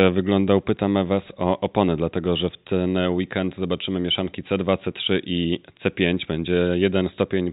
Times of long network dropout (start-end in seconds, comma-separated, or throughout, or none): none